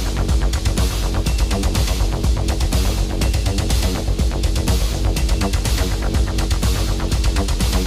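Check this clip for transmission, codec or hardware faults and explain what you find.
No transmission, codec or hardware faults.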